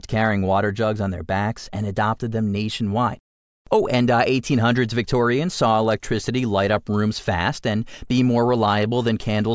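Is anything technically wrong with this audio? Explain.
No, no technical faults.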